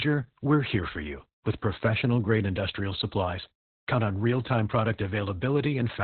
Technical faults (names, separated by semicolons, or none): Opus voice compression